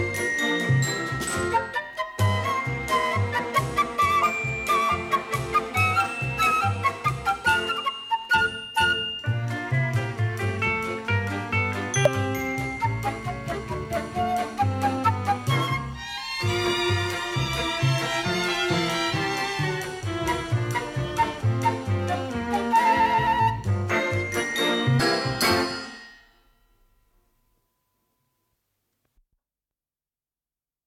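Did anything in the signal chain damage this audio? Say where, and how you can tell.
Yes. At 12.05 to 12.07 s and again at 24.99 to 25.02 s the audio lurches forward, losing about 50 ms of material each time. This is compressed frames skipped at the codec or storage stage: whole coded frames were missing or rejected as damaged by the decoder, so playback jumped ahead by a frame multiple.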